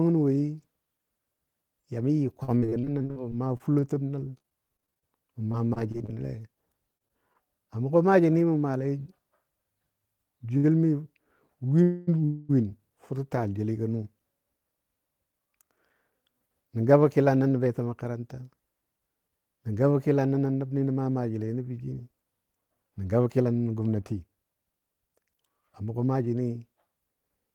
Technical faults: repeated packet loss (robotic sound); short stall from a late packet; call audio freeze; jitter buffer speed-up

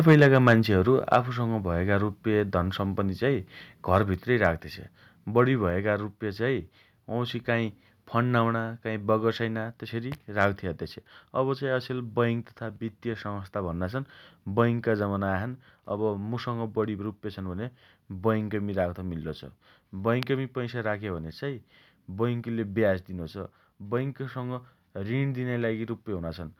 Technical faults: microphone overload; microphone volume stepped down

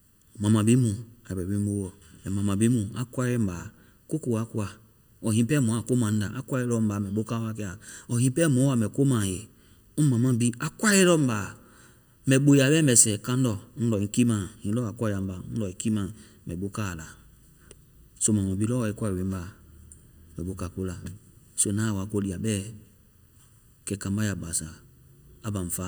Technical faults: channel delay (comb filtering)

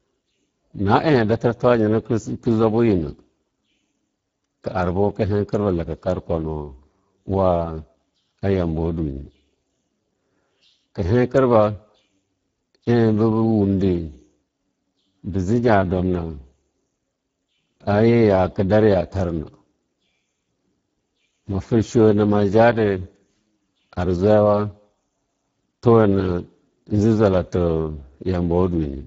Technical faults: Speex codec

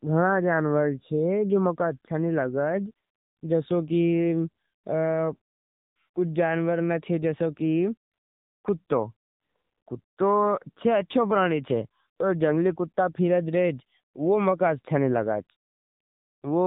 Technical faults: AMR narrowband mobile codec

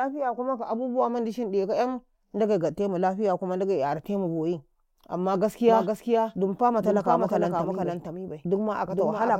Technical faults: doubled audio track

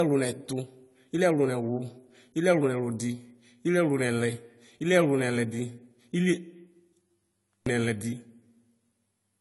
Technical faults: low-bitrate audio saved at a high bitrate

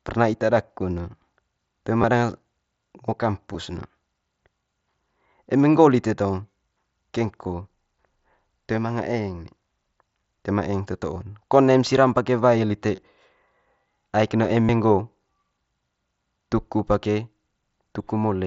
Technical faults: concealed Bluetooth headset packet loss

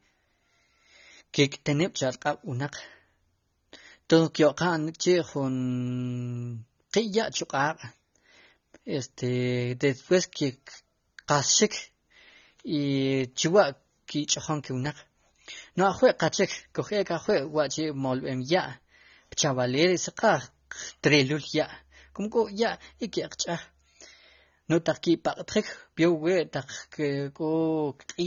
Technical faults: AAC compression

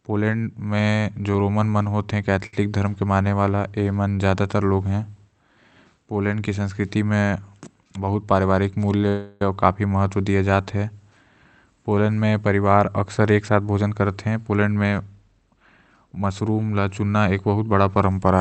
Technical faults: short stall from a late packet; jitter buffer speed-up; call audio freeze

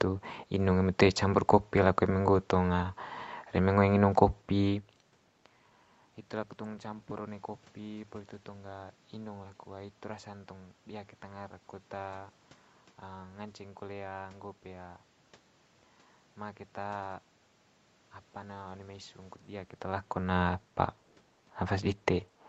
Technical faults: none

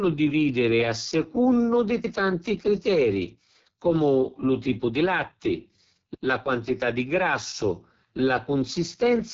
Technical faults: AMR wideband (HD Voice) codec

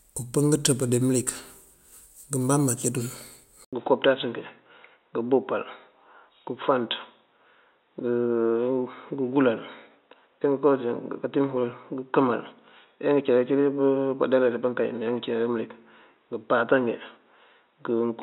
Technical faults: input switched to a poorer device

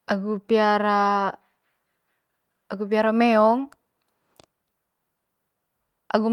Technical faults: none

